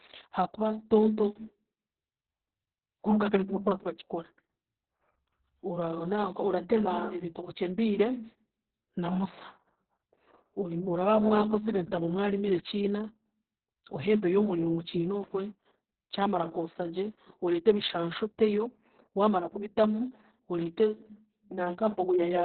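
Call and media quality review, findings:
Opus voice compression throughout: speech muffled, hoarse, slightly robotic; nothing above 4.3 kHz. SILK narrowband at a very low rate, fitting about 6 kbps with 60 ms frames. Coarse excitation coding adds the roughness, unlike a plain low-pass band limit.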